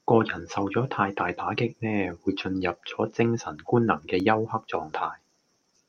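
No technical faults occur at any point in the recording, so there is nothing to place in time order.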